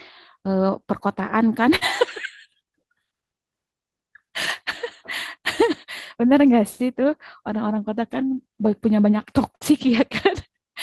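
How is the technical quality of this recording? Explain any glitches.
The recording has two brief glitches in the speech, both the same kind of dropout.

Burst of packet loss, at 1.75 to 1.84 s and 9.55 to 9.64 s: about 60 ms of audio never arrived, so the receiver stretched and faded the last sound over the gap, giving a short buzz or hiss before the speech jumps ahead.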